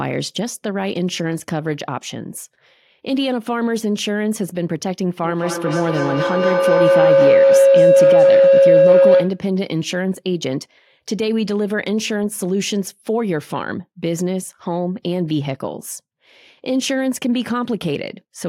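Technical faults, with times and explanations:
5.23–9.45 s, feedback howl: the microphone is picking up a loudspeaker on the same call, so each trip round the loop comes back louder and narrows to around 500 Hz, with the repeats roughly every fifth of a second and peaking about 8 dB above the speech.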